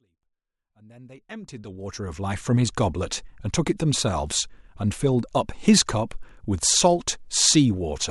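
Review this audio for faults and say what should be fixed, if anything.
No faults; nothing needs fixing.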